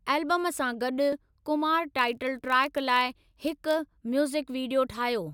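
Speech, with two technical faults. At 1.13 s, right after "सां गॾु", there is a small jump in the sound. A tiny slice, a few milliseconds, is missing and the two sides are butted together with no gap, the signature of a dropped buffer (overrun), likely from samples being overwritten before the program collected them. From 1.97 s to 3.77 s, starting after "सां गॾु कुमार", a steady buzz at 43.1 Hz sits under the audio. That is a block size mismatch (padded): each block arriving short of a reading stage that fits a 1024-sample block, with the remainder zero-filled, so a brief gap repeats at the block rate. Playback slows only marginally, by a factor of 0.999, and the pitch stays essentially unchanged.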